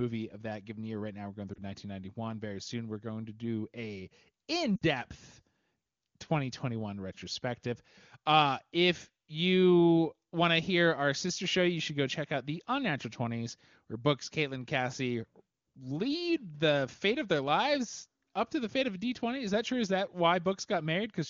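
At 1.53 s, lost AMR speech frames cause a brief dip. Corrupted radio data forced the decoder to guess. The gap fits one missing frame. At 4.76 to 4.85 s a longer gap, consistent with three frames, fades the speech to near silence, and the voice returns weak or rough for a moment before the clear wideband audio resumes.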